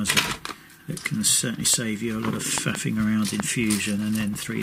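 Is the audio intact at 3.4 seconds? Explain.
No. A single sharp loud pop sits well above the sound from 3.40 to 3.42 s, likely a sudden voltage pulse from a plug, switch or static discharge.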